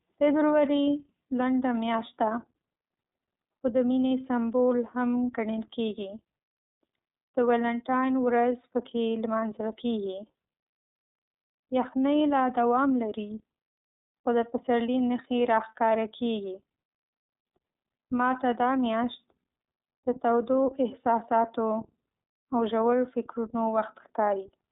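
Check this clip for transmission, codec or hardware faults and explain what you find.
There's one codec fault, running through the whole speech clip: iLBC codec damage. Each frame's excitation is coded independently, leaving speech plainly rough and slightly synthetic. The band is telephone-narrow, with nothing above 3.8 kHz, which fits iLBC's 30 ms, 13.33 kbps mode.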